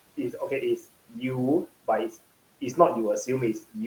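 Noise suppressor artifacts run through the whole of this speech clip. The suppressor pulls down each frequency band it judges to be steady background, frame by frame, cutting that noise by about 18 dB. The room noise, which sits about 18 dB below the speech, drops away in the pauses and swells back under the talking. That moving, band-by-band character sets it apart from a plain noise gate, which switches everything on and off at once.

From 1.08 to 1.23 s there is speech cut by the noise suppressor. For about 100 ms of that stretch, the suppressor mistook part of the speech for background and turned it down along with the noise, by as much as about 15 dB at its deepest. The affected sound comes across as swallowed and faint rather than missing. Unlike a dropout, there is no gap or click: the speech is still there, just sunk toward the noise floor.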